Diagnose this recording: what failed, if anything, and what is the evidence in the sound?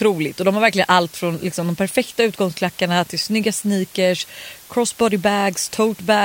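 The sample-format conversion reduced the speech to about 7 bits, with dither added before rounding. Throughout the recording there is a constant, even hiss roughly 25 dB below the speech, and no distortion. The dither turns the coarse rounding error into steady white noise.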